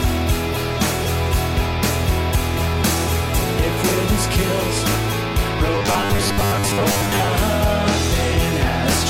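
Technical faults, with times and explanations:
5.75–7.33 s, robotic sound from repeated short buffers: a rigid metallic buzz fixed at 100 Hz, which fits a 10 ms chunk being replayed, likely because new audio arrived too seldom. Roughly half is repeats. Unlike dropouts, there are no gaps, only that imposed pitch.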